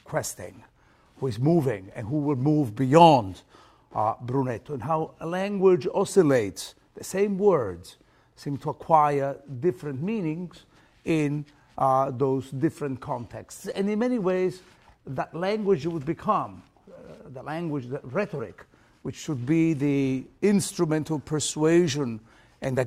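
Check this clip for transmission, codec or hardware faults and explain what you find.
Listening through the clip, nothing stood out as a transmission, codec or hardware problem.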